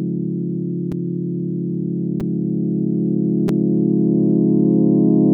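At 0.92 s, 2.2 s and 3.48 s the everyday sound shows a repeated buffer: new audio arrived late, so a 5 ms block replayed once, then twice, then twice. Blocks this small make each event a click or brief buzz rather than an audible stutter.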